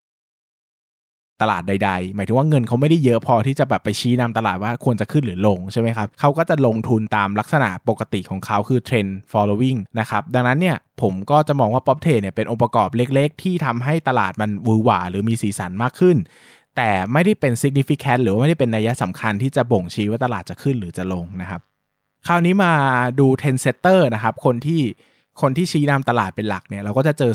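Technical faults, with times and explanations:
No technical faults are audible.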